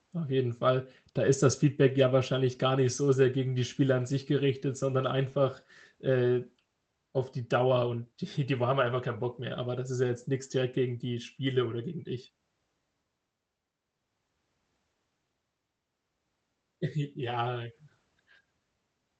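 No technical faults can be heard in the speech, which comes through a call codec path working as expected.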